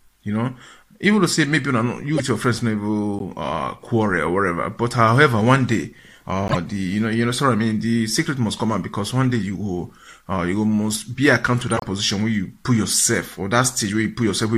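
You get a corrupt frame decoded five times: 2.15 to 2.20 s, 3.19 to 3.22 s, 6.48 to 6.57 s, a tiny tick at 9.25 s, and the longest at 11.72 to 11.86 s. Damaged bits got played anyway, so misread gains and codes throw energy into the wrong frequencies for a few frames at a time. Each one sounds like a chirpy, noisy blip. The ones at 2.15 and 6.48 s peak around -5 dBFS, and the 9.25 s one is much quieter.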